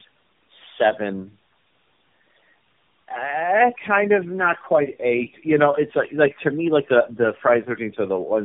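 Rough, muffled and warbly from start to finish, with nothing above 3.5 kHz. This is tandem speech coding: the call was decoded and re-encoded at each network border, so every coder worked on the last one's damage. The cumulative grit fits about four narrowband speech codecs in a row.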